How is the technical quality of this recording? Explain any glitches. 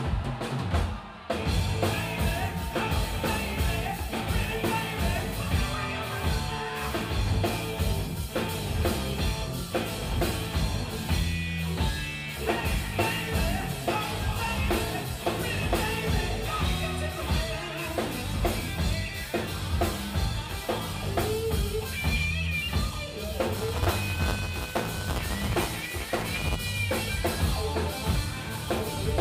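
There is one glitch. From 23.55 to 26.56 s the sound takes on a continuous robotic buzz at 188 Hz. That is buffer tearing: writer and reader slipped, so about a tenth of each buffer replays audio around 10 ms old, with hard joins, which fits a 256-sample buffer.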